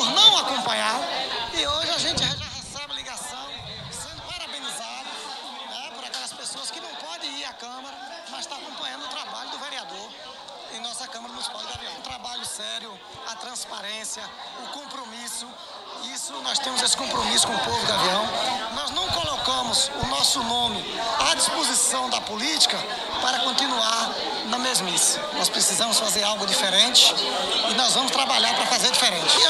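Zipper noise at 2.14 to 2.51 s and 16.25 to 16.81 s: the level falls by roughly 10 dB, then later rises by about the same, in coarse 3 dB jumps with no smoothing. Each jump clicks, producing a fast ticking about ten times a second, then about seven, over the sound.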